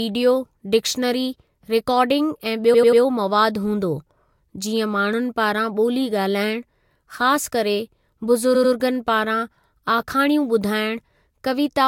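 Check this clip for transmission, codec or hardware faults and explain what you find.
There's a stutter problem here, from repeated frames, twice in this speech. At 2.73–3.01 s and 8.54–8.73 s, a run of compressed frames got sent again. That replays an 83 ms block three extra times and a 93 ms block twice, respectively, so you hear a quick stammer.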